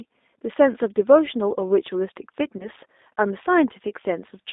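Speech throughout, and the whole thing has that slightly rough, synthetic edge you get from the G.729 codec, plainly audible here. The band sits at about 250 Hz to 3.7 kHz, nothing up top, and the rough, rebuilt texture fits an 8 kbit/s G.729A link. The voice is being resynthesised from a vocal tract filter, a pitch predictor and a handful of pulses per frame, not carried as a waveform, so it comes through intelligible but clearly processed. Around 2.57 to 2.69 s there's a VoIP packet loss concealed by the speech codec. About 30 ms of audio went missing, which fits a single lost packet. The decoder covered the gap by stretching its last pitch and filter state and fading the gain, so you hear a short smeared stretch that fades. Because each frame builds on the previous one, the voice stays weak and a bit distorted for a while after the audio resumes, out to about 2.69 s.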